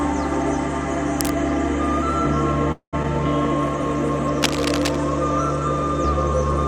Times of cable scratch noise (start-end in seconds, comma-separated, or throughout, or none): 1.19-1.34, 4.42-4.97